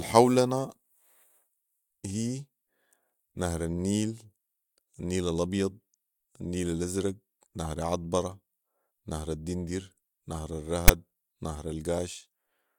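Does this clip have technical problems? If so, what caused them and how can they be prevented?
Yes. At 10.88 s a brief, hard-edged burst of rasping static breaks into the speech: file tags played as audio. A block of text metadata was decoded as sample data, so the character bytes became a harsh, one-sided rasp. Prevent it by having the reader locate and skip tag chunks before decoding audio.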